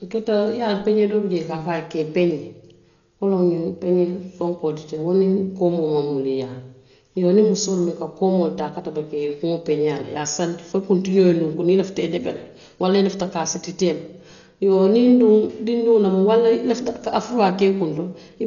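Across the whole speech clip, nothing survives above 6.9 kHz, and heavy rough, fluttering noise clings to voiced sounds, the likely result of Dolby Digital compression at a very low bitrate, around 40 kbps. Unlike a plain low-pass filter, the dull band limit comes with noise filling the starved frequency lines.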